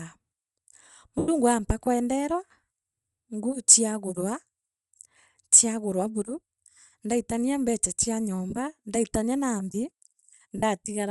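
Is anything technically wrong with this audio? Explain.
Yes. Throughout the speech, likely Bluetooth LC3 compression, fitting 7.5 ms frames at about 48 kbps, strips and noise-fills the upper spectrum, leaving a plainly audible breathy, grainy edge. Lost LE Audio frames at 1.18–1.29 s, 8.50–8.53 s and 10.57–10.63 s made the decoder repeat the last spectrum with scrambled phase, so each gap becomes a brief noisy smear. The longest, about 0.1 s, fits roughly 13 missing frames.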